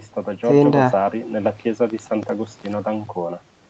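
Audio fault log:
No faults heard anywhere in this speech recording.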